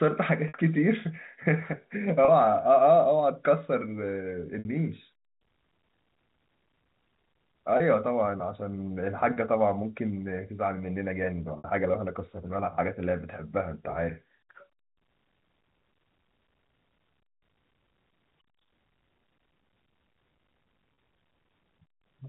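Packet loss with pitch repetition occurs seven times, at 0.48 s, 2.25 s, 4.59 s, 7.77 s, 9.33 s, 11.58 s and 20.94 s. Each gap is either 30 ms or 60 ms, which fits one or two lost packets. The receiver filled each hole by looping the last pitch cycle of the speech. The 30 ms gaps sound like a brief, slightly buzzy hold on the sound, while in the 60 ms gaps the loop fades out over about 50 ms before the speech returns with a short cross-fade. The telephone-band coding around these gaps keeps everything below 4 kHz.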